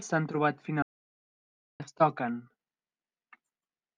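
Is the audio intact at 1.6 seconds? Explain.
No. An audio dropout to silence runs from 0.82 to 1.80 s: the input was likely lost while recording continued writing silence. The speech cuts off abruptly, leaving nearly a second of dead silence without room tone, resuming at "es toquen".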